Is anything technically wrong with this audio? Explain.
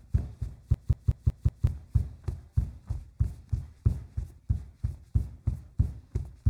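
Yes. From 0.74 to 1.67 s, a system hang loop repeats one 186 ms slice about five times (5.4 Hz stutter), consistent with an 8192-sample ring buffer replaying. Roughly a second of audio is lost.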